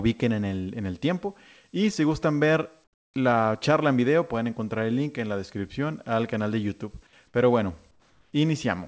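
From 2.84 to 3.14 s, between "y si gustan ver" and "la charla en video", the real background drops out for 0.3 s and is replaced by comfort noise: a flat, featureless hiss about 14 dB quieter. The same happens from 7.91 to 8.33 s, with a smaller dip of about 5 dB. The likely cause is discontinuous transmission on the call link, where the receiver synthesises approximate noise during gaps the sender's voice detector judged silent. Above 8 kHz the call audio carries nothing at all.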